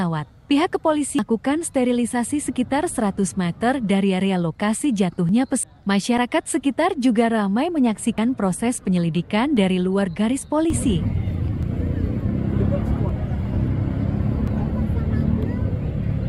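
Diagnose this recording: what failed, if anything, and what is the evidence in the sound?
Damaged data in a compressed stream, at the codec or storage stage: brief disturbances at 1.19, 5.63 and 13.09 s. Corrupt bytes make the decoder misread frames and resync at the next header. On a spectrogram, each shows as a brief disruption.

Tiny skips ahead at 5.29, 6.18, 8.18, 9.57, 11.63 and 14.48 s point to the driver or buffer stage, likely a dropped buffer (overrun). Each loses about 10 ms, or around 30 ms at 8.18 s. The waveform shows an abrupt splice with no gap, and the spectrogram a vertical line.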